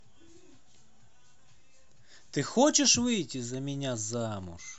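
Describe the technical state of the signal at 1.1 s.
At 1.1 s the speech signal is intact, with no dropout, clipping, distortion or other fault audible at that moment.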